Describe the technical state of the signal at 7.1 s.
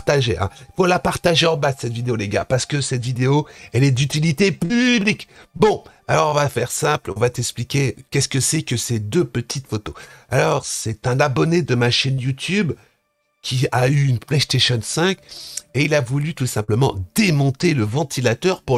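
At 7.12 to 7.18 s there is a short concealed packet loss. About 40 ms of audio never arrived in time, and the receiver filled about 37 ms of it by extending the preceding sound, then crossfaded back into the real signal. The result is a brief smear or wobble.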